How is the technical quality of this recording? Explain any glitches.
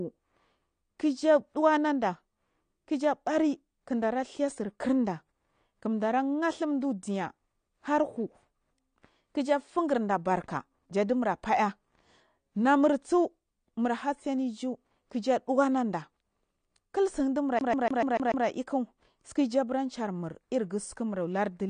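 The recording has clearly audible compression damage throughout and one skipping glitch near the end.

From start to finish, nothing is present above 9.6 kHz, and the speech sounds dull and lacking in detail. This is likely AAC-LC compression at a low bitrate, around 32 kbps. The encoder saves data by discarding the top of the spectrum. A spectrogram shows a flat ceiling at 9.6 kHz.

From 17.59 to 18.46 s, a fragment about 146 ms long plays six times in a row, a fast, even stutter. This is a CD stuck on one turn: at the same point on every rotation, a scratch throws the laser back one track. The waveform shows identical blocks separated by short gaps at each jump.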